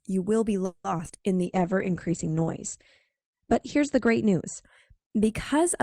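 From 0.65 to 1.11 s the stream suffers repeated packet loss, giving a robotic sound. Several holes arrive in quick succession, the longest about 190 ms. Roughly half the span is patched by stretching the last sound and about 60 ms simply drops out, so the speech turns choppy and robotic.

From 1.47 to 4.71 s a call bitrate drop sets in. The encoder is starved of bits, in a way that fits a fall from about 48 kbps to 10 kbps, with the low point lasting about 2.3 s. The coarser coding makes the speech rough and watery, and the audio bandwidth shrinks from 20 kHz to 8 kHz, so it sounds muffled until the rate recovers.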